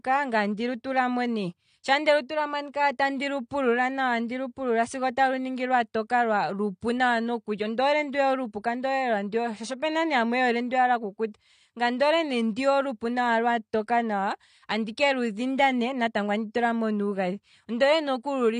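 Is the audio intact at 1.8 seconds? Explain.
No. At 1.8 seconds, as throughout the clip, the speech has likely been through AAC compression at a low bitrate, consistent with about 32 kbps. Nothing survives above 9.7 kHz, and starved spectral bands leave sibilants dull, smeared and fizzy, with a warbling texture.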